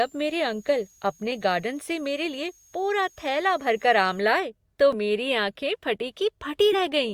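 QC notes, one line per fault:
0.0 to 4.2 s, switching supply whistle: a thin high whistle sits under the speech, wandering between about 6.5 kHz and 7.3 kHz and centred near 7 kHz, at roughly 35 dB below the speech. A switching power supply in the chain is running in an audible burst mode or beating against another supply, so its switching tone lands in the hearing range and its pitch shifts as the load changes. It stops at 4.2 s.
4.93 s, compressed frames skipped: the speech jumps forward by roughly 50 ms, losing a short slice of audio. Whole frames of the compressed stream were not played, either missing from the file or rejected by the decoder as damaged. The skip is a whole number of frames.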